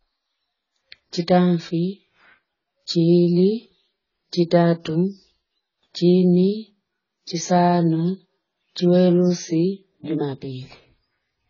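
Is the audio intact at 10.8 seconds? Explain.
No. AAC compression runs through the whole clip, and 10.8 seconds is no exception: nothing is heard above about 7.1 kHz, and the sound is dull and smeared, with a warbling, fizzy edge on sibilants. The damage is heavy, likely from AAC-LC coding at a bitrate around 16 kbps, where the coder quantises its frequency lines so coarsely that it drops the top band and leaves gaps or noisy patches in what remains.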